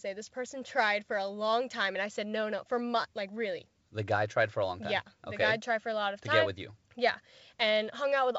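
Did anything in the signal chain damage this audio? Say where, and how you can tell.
No, nothing in the signal chain damaged this audio.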